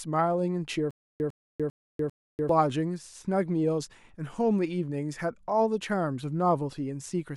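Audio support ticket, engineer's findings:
Stutter with silent gaps, 0.91–2.49 s. A 103 ms fragment of speech repeats 4 times, each followed by 293 ms of digital silence, on a steady 397 ms cycle. The original audio for that span is missing. Probable component: playback or stream buffer, likely stalling on underrun, replaying its last fragment at each retry, then running empty.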